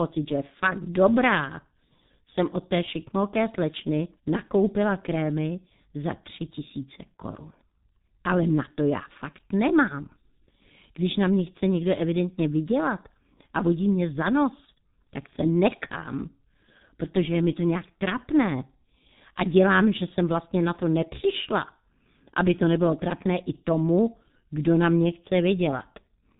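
From start to finish the speech passes through a heavily degrading G.723.1 codec, which fits its 6.3 kbit/s mode. Nothing above 3.8 kHz survives. Unlike a plain low-pass filter, the slow-updating voice model and 30 ms frames also make the voice hoarse and smear consonants.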